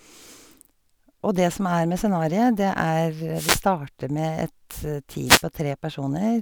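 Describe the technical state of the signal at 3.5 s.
At 3.5 s the speech is hit by a wireless microphone noise hit lasting from 3.33 to 3.63 s. The FM radio link fades as reflected paths cancel, letting receiver noise surge up as a brief swish of static. A spectrogram shows a broadband noise band across that span, with noise filling the waveform.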